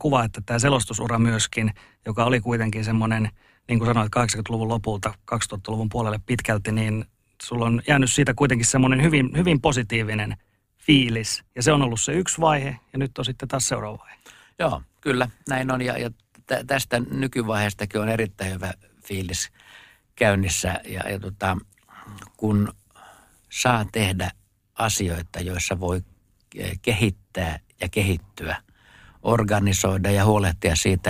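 Overlap-add ripple throughout: badly overlapped frames make the level dip about 6 dB around 100 times a second, a metallic buzz seen as waveform scalloping.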